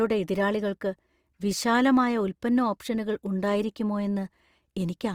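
Throughout the speech the sound is grainy and rough, with a noisy fizz laid over the upper range rather than the swirling, watery holes of MP3. This points to Opus compression, likely at a low bitrate around 24 kbps in its full-band music mode.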